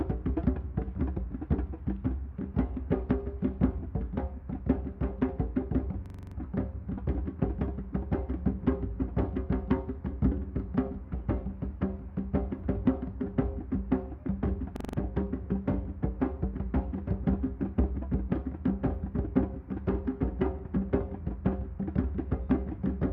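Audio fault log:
6.06–6.36 s and 14.76–14.98 s, system hang loop: the system stalled while the sound hardware kept replaying one ring buffer. A 42.67 ms slice repeats 7 and then 5 times at 23.4 Hz, a rapid machine-gun stutter that fits a 2048-sample buffer.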